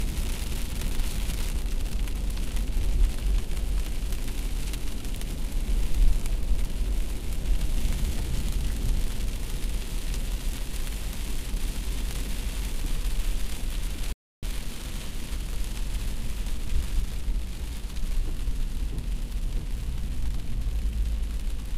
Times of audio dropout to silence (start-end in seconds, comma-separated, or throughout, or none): 14.13-14.43